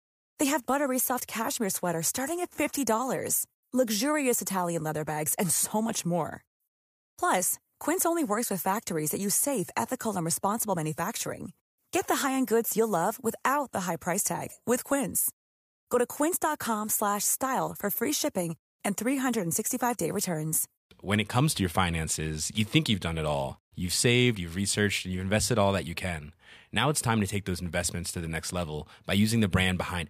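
No technical faults are audible.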